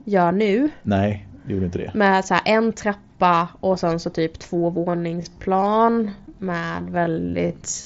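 Speech that abruptly slows to 0.61 times its pace from 4.86 s to the end while the pitch stays put, so it drags. This time-stretched section is likely software lengthening the audio by repeating short pieces. Nothing reaches above about 7.7 kHz, as expected over a Bluetooth mSBC headset codec.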